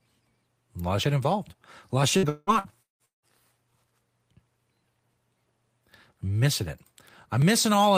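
From 2.17 to 3.32 s, just after "lot of", there is repeated packet loss, heard as choppy, robotic speech. Six gaps open in quick succession, the longest 182 ms. Each is bridged by extending the last received sound. That patching accounts for 56% of the span, so the texture turns synthetic and pieces of the speech drop out.

At 7.42 s a small forward jump in the speech points to a dropped buffer (overrun). Roughly 20 ms of audio is missing, with no silence at the join. The likely cause is that samples were not read out before the hardware overwrote them, so the audio on either side is spliced directly.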